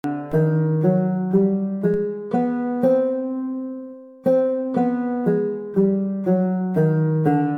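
At 0.32 s and 1.94 s, DC steps of about -29 dBFS jerk the waveform's zero line up or down, each a low thump that relaxes back through a roughly 5 Hz high-pass.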